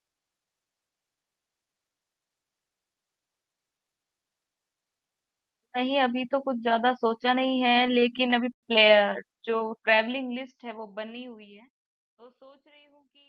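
Between 7.23 and 8.65 s the speech drags and stutters through eleven brief hold-ups, the longest about 0.1 s, with the held sound fading in the longer ones. These are repeated stalls (stutter): packets arrived late, the jitter buffer kept running dry, and the receiver stretched the last sound until audio resumed, filling about 0.21 s in all without losing anything.

From 9.50 to 11.19 s, while a smooth fade-out sets in from around 9.5 s, the speech runs slower at unchanged pitch and sounds drawn out. This is a jitter buffer slow-down: repeating single pitch periods added 150 ms, playing the stretch at 91% speed.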